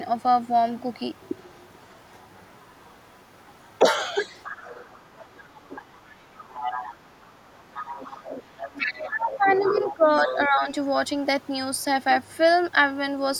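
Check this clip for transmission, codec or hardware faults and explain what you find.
Two echo-path faults are audible in this speech.

A second voice runs under the talker from 0.18 to 3.78 s, 4.22 to 9.94 s, 10.27 to 10.38 s and 12.25 to 12.34 s. It is faint at first, about 35 dB down, and much louder later, at about 15 dB and 10 dB down. This is the other side's voice leaking through, likely loudspeaker echo that the canceller left in the microphone signal.

The talker's level sags by about 10 to 15 dB at 4.43 to 4.71 s, 5.68 to 5.85 s and 8.77 to 10.68 s. This is speech suppressed in double talk: the canceller likely mistook overlapping speech for echo and attenuated both.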